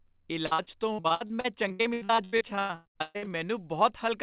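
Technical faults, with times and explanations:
0.46–3.3 s, repeated packet loss (robotic sound): more than two dozen gaps follow one another across this stretch, the longest about 125 ms. Each hole is papered over by stretching out the sound just before it, so nearly half the span is this synthetic fill rather than real signal. The rapid alternation of genuine fragments and smeared continuations gives the choppy, robotic texture, heard through the narrowband call path with nothing above 4 kHz.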